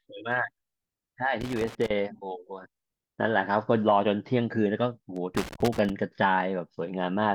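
A speech recording with two bursts of loose connector crackle, from 1.41 to 1.90 s and again from 5.16 to 5.90 s. Each is an irregular patch of scratching and crackle laid over the signal. A worn or dirty contact in the cable path is making and breaking as it shifts, chopping the audio on and off, and any DC present on the line turns each reconnection into a pop.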